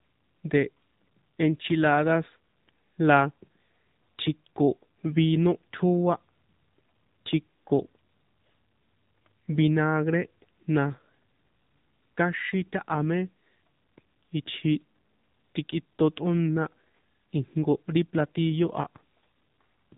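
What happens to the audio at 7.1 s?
At 7.1 s, as across the whole clip, the speech has been squeezed through the AMR narrowband mobile codec at a low bitrate, likely around 7.4 kbps, which rebuilds the voice from a vocal-tract model and a few pulses. Nothing above 3.8 kHz survives, so the voice sounds muffled, buzzy and plainly synthetic.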